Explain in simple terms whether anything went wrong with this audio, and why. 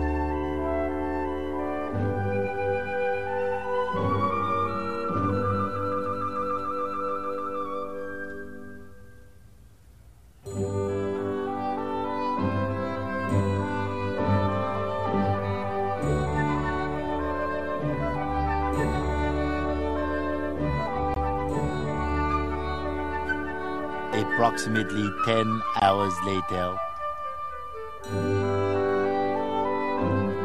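Two brief dropouts break the sound, at 21.14 s and 25.80 s. Each is a block of digital silence: for about 20 milliseconds the audio is replaced by nothing at all, then it snaps straight back. Because the sound stops and restarts abruptly, with no fade, each cut is sudden rather than smooth. The gap is very short, so it comes across as a quick break in the sound.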